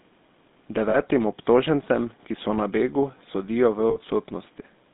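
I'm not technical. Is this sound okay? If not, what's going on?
No, not quite. The whole recording has gone through the GSM full-rate codec, the original mobile phone voice coder. It doesn't store the sound itself. It stores a rough model of how the voice is shaped and rebuilds it from a coarse pulse pattern, and it throws away most of the high end, keeping roughly 200 Hz to 3.7 kHz. That's why the speech sounds thin, buzzy and a bit gravelly all the way through, like an old cell call.

There are also two spots with lost GSM frames, where bits of the signal didn't arrive. The first is around 0.90 to 0.98 s, just before "obtožencem ki so na". The second is around 3.90 to 3.98 s. The phone filled each gap by repeating the last good chunk. You hear a brief rough, metallic ring, about 40 ms the first time and 60 ms the second, in place of the real speech.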